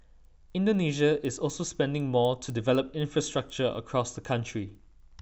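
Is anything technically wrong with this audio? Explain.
Yes. A resampler restarted on every block runs throughout the speech. Each 250 ms block was converted from 16 kHz to 48 kHz on its own, so the filter lacked real neighbouring samples at every edge, leaving small errors heard as steady ticks at 4 Hz while speech is present.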